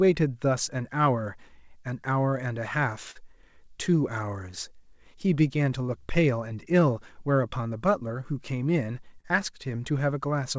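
Clock drift between sender and receiver runs through the whole speech clip. The sending side's clock is running roughly 3 percent slow against the receiver's, so audio arrives a little too slowly and the jitter buffer keeps tending to drain. Unlike a network fault, this has no single event. It is a steady mismatch that the receiver has to keep absorbing, heard over the dull top end, with nothing above 8 kHz from the G.722 call path.

The result is repeated timing corrections from 0.06 s to 10.33 s. The receiver keeps stretching short pieces to cover the shortfall, playing the material at about 98 percent speed and adding something like a fifth of a second over the stretch. Every edit pushes the same way but lands at uneven spacing. The sound comes across as a faintly dragging, slightly unsteady tempo with occasional tiny hiccups, not as distinct gaps.

A short stall from a late packet interrupts at 3.11 to 3.17 s and again at 9.21 to 9.26 s. 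Each time a packet missed its slot, the buffer ran dry, and the receiver held the last sound for about 40 ms and then 36 ms before resuming from the same point. Nothing is lost. A single sound is briefly frozen with a slight buzzy or dipping quality. This isolated held moment is what separates it from the diffuse tempo wobble of the drift corrections.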